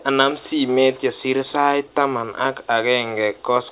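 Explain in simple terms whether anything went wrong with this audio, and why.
Nothing went wrong with this audio; it came through an ordinary phone-style call line, which is why nothing above 4 kHz can be heard.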